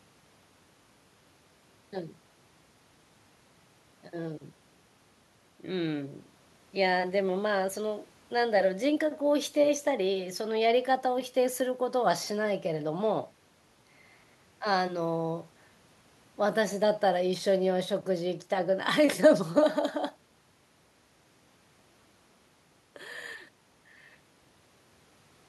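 A speech recording with nothing technically wrong in it.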